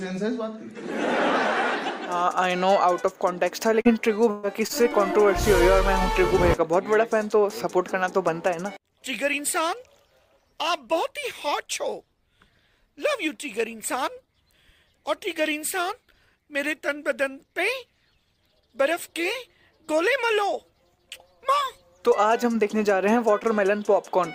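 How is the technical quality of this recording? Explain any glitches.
Three packet-loss glitches cluster between 3.8 and 4.7 seconds, all concealed rather than left silent.

Short concealed packet loss at 3.81 to 3.87 s and 4.67 to 4.71 s: roughly 20 to 40 ms went missing, and the receiver extended the preceding sound, leaving a brief smear or wobble instead of a skip.

Burst of packet loss at 4.31 to 4.45 s: about 120 ms never arrived, so the last sound was stretched and faded for roughly 121 ms before playback resumed further on. It is noticeably longer than the short drops, with material missing in between.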